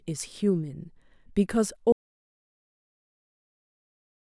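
At 1.92 s the speech cuts off mid-flow and never returns: an audio dropout to silence runs from there to the end of the clip, about 2.3 s. The signal falls straight to silence, with no room tone or hiss left behind, so the input was likely lost through a disconnected device, failed link or mute while recording carried on. On the waveform it shows as a flat line; on a spectrogram, a completely blank region across all frequencies.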